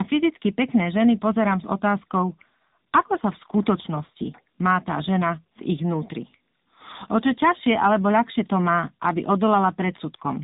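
From start to finish the speech carries tandem speech coding: it sounds like it went through two speech codecs in a row, each one decoding and then re-encoding what the previous one had already degraded. You get a rough, warbly texture and a muffled top end, with nothing above 3.8 kHz. The character points to something like a CVSD leg handed off through A-law onto a low-rate AMR-NB link, around 7.95 kbit/s.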